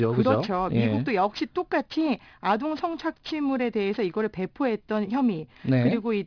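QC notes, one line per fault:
Throughout: aliasing. The speech was taken down to a rate that points to 11 kHz without an adequate low-pass first, so everything above the 5.5 kHz fold point reflects back into the band at wrong, unrelated frequencies. Sibilants and fricatives come out gritty and metallic rather than bright, and the spectrum stays dense right up to the band edge instead of rolling off. The folded energy sits roughly 25 dB under the signal.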